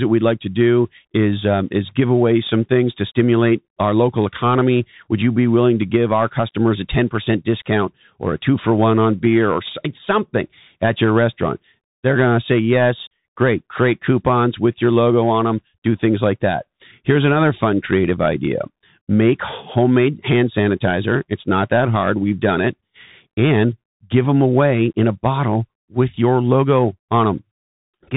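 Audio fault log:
Throughout: Bluetooth CVSD headset codec. The speech is narrowband, with nothing above 3.8 kHz, and plainly audible codec damage fits a 64 kbps CVSD stream. This codec sends one bit per sample to say only up or down, with an adapting step size. Loud high-frequency sounds rise faster than the step can follow and distort, s sounds come out scratchy, and a granular hiss sits beneath the speech from the constant stepping.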